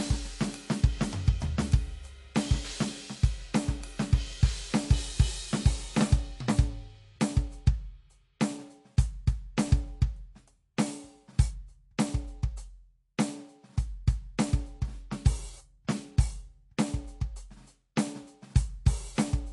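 From start to finish the music has likely been squeezed through MP3 compression at a low bitrate, with damage that fits roughly 48 kbps. Starved of bits, the encoder discards everything above 11.3 kHz, so the top end stops dead and sounds dull. It also drops weaker frequency components that flicker in and out between frames, leaving a plainly audible watery, swirling texture, metallic chirps in the brightest sounds, and softened, smeared attacks.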